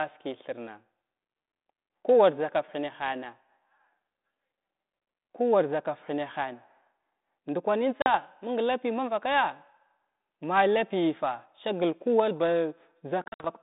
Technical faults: packet loss on an ADPCM call

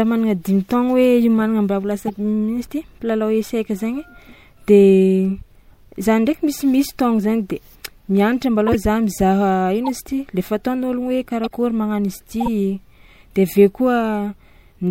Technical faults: corrupt frame decoded; compressed frames skipped

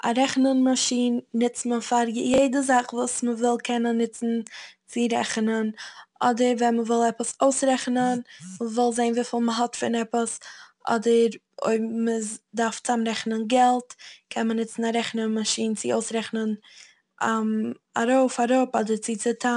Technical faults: 4-bit ADPCM compression; chunks out of order

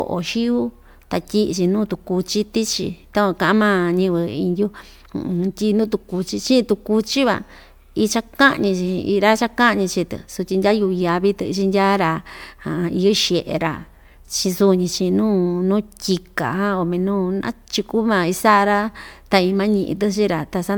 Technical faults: generation loss

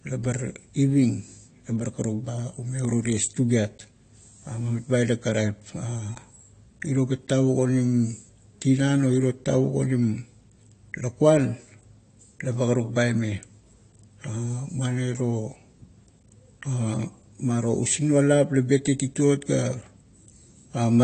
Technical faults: AAC compression

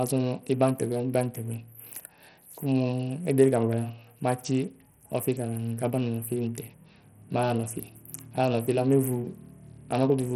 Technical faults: Bluetooth SBC compression

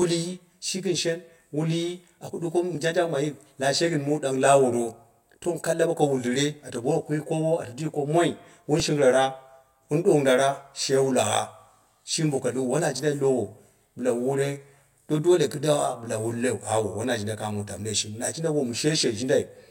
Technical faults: channel delay (comb filtering); repeated buffer

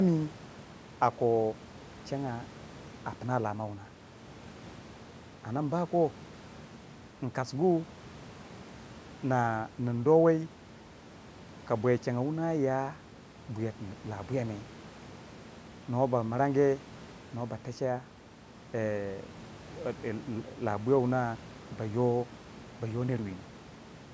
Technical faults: none

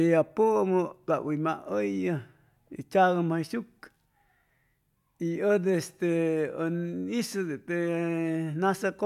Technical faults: none

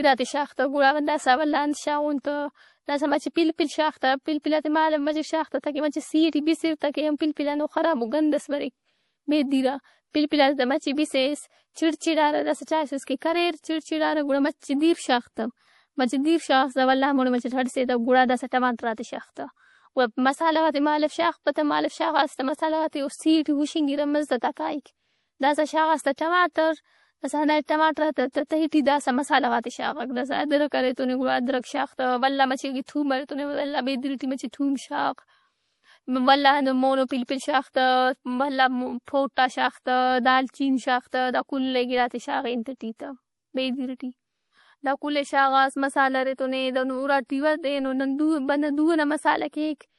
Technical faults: MP3 compression; pre-echo

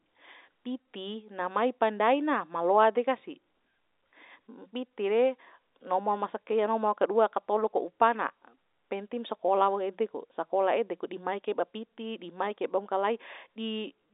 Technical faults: none

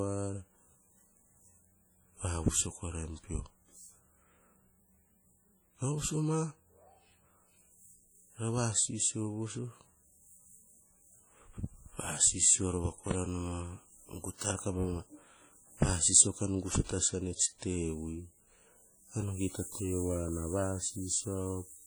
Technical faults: WMA compression; loud pop

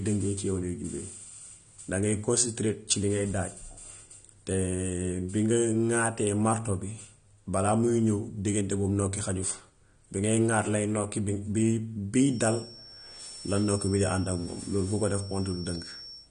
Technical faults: AAC compression; feedback whistle

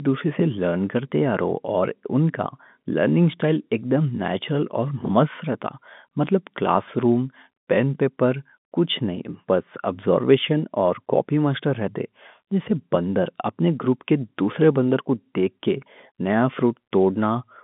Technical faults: none

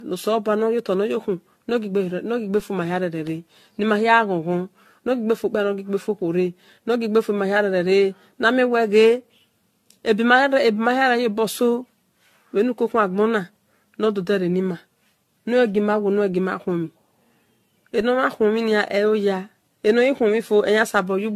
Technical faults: generation loss; DC step

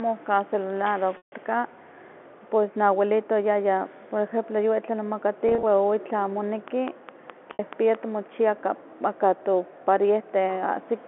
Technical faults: packet loss with pitch repetition; train of clicks

